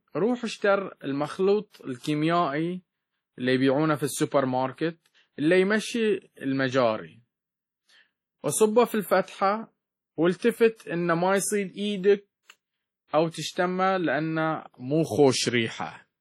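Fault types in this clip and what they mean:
WMA compression: The whole 16-second clip has a ringing, washy character, with a hiss that swells and fades along with the speech. That points to heavy damage from a transform codec at a low rate, likely WMA at around 32 kbps. Its quantisation noise is spread over long blocks, and weak detail is discarded. On a spectrogram, energy appears in smeared, blocky patches with holes where quiet components were zeroed, and nothing shows above 20.1 kHz.
pre-echo: Three attacks, at 1.70 s, 10.37 s and 10.76 s, are each preceded by a brief hiss lasting about 40 ms, 48 ms and 39 ms. Each onset sounds softened rather than crisp. When a sharp attack lands late in a coding block, noise sized for the loud part also fills the silence just before it. On a waveform, a low fuzzy ramp leads into each transient, and on a spectrogram, a faint broadband smear appears just before each onset.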